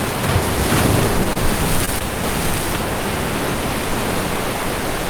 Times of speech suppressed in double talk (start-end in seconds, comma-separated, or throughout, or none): none